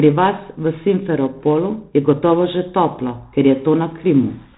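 Throughout, heavy 4-bit ADPCM compression adds a gritty hiss that rises and falls with the speech, unlike steady noise. Nothing passes above 3.9 kHz, which fits about 32 kbps.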